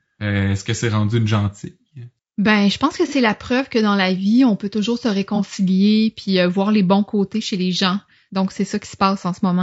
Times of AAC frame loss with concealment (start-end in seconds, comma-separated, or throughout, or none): 3.08-3.13, 5.36-5.41